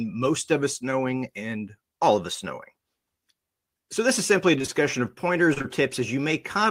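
Short concealed packet loss occurs after "this is simply a" from 4.58 to 4.70 s, and again from 5.54 to 5.66 s, each three consecutive 20 ms gaps filled by extrapolated audio, heard as a brief smear.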